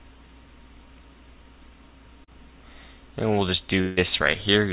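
At 2.24 s there is a short concealed packet loss lasting to 2.29 s. About 40 ms of audio did not reach the decoder in time. The receiver covered roughly 33 ms of it by stretching the preceding sound forward, then blended back into the real signal. The result is a brief smear in the sound. It passes quickly, and the material that was in that gap is gone.

From 3.81 s to 3.99 s comes a longer break, likely a long network dropout. About 160 ms of audio never arrived. The receiver filled about 154 ms by continuing the last sound as a fading buzz or hiss. No stretch falls to silence. When real audio returns, the lost portion is simply missing. All of this sits on a G.711 mu-law call path with nothing above 4 kHz.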